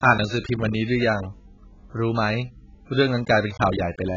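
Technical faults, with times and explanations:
Throughout, AAC compression: the speech was likely passed through a low-bitrate AAC-LC encoder, which fits about 12 kbps. It discarded everything above 7.6 kHz and quantised the remaining bands coarsely, leaving the sound dull and smeared, with a warbling, fizzy texture on sibilants.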